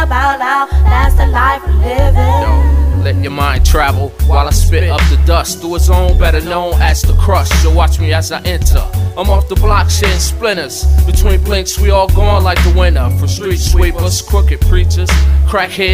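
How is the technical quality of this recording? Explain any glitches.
The recording carries a persistent fault: a stuck bit runs through the whole clip, from start to finish. A harsh, buzzy distortion rides on the audio, and quiet passages fill with a gritty noise floor instead of falling silent. This likely comes from one data line or converter bit held fixed, so roughly half the samples land off by that bit's weight, a step of about -40 dBFS. The error follows the waveform and flips with the sign of small values, which is why the pauses turn noisy.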